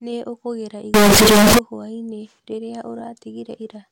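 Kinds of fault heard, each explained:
Float read as integer: from 0.94 to 1.59 s the speech turns into loud, harsh, near-square noise, likely 32-bit float samples misread as 32-bit integers.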